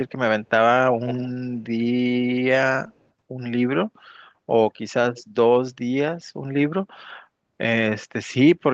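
At 0.95 s a faint delayed copy of the speech trails in about 140 ms behind, lasting until 1.31 s and sitting maybe 15 dB under the main signal. It's an echo leak, likely a far-end loudspeaker bleeding into a mic whose echo canceller didn't fully scrub it. Two brief scraps follow: a barely-there blip at 2.98 s, and at 5.15 s a slightly clearer one, around 150 ms late, over the band-limited, 8 kHz-topped call audio.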